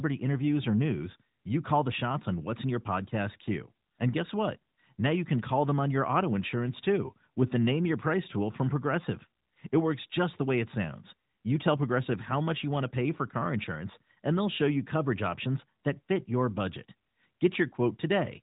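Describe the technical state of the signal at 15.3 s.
At 15.30 s the audio is intact, with no fault present, only the narrowband character of the AMR narrowband mobile codec path, which passes nothing above about 3.8 kHz.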